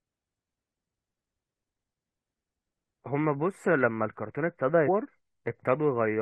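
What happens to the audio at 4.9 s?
Damaged data in the compressed stream hits the speech here, from about 4.87 to 4.89 s. A stretch of the encoded bytes is corrupted, so the decoder can't read those frames properly. It loses its place in the stream and has to hunt for the next valid frame header before normal decoding resumes. For that brief window of roughly 20 ms, the result is a short, harsh blip or chirp that cuts across the speech.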